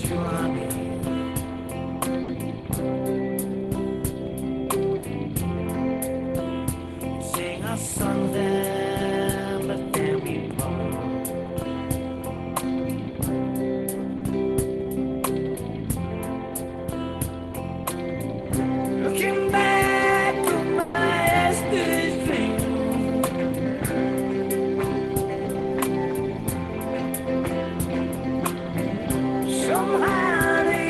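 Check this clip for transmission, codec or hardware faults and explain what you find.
Yes, there are three kinds of jitter-buffer fault. The audio passes through an Opus call path whose content stops near 12 kHz, and the faults sit on top of that.

Short stall from a late packet, at 2.23–2.29 s and 14.17–14.22 s: a packet arrived late, so the receiver stretched the last sound by 50 ms and then 40 ms before resuming, with nothing lost. It sounds like a brief held sound with a slight buzz or dip. On a spectrogram the harmonics flatten into a short frozen band, and the waveform shows repeated identical cycles.

Jitter buffer speed-up, at 8.45–10.18 s (102%), 18.66–19.88 s (103%) and 23.21–23.78 s (108%): surplus buffered audio was trimmed by cutting out pitch-period slices. Roughly 40 ms went from each of the first two stretches and about 50 ms from the last. The sound runs faster at unchanged pitch, most noticeably hurried in the final one. 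The spectrogram keeps its pitch lines but packs events closer together, and the waveform shows small splice seams.

Call audio freeze, at 20.80–20.95 s: the buffer ran dry, likely because packets were held up in transit. The receiver extended the last sound for 140 ms as a buzz or hiss that fades, inserting a gap without losing material. The spectrogram shows a held spectral slice decaying in level, and the waveform shows repeated cycles with a shrinking envelope.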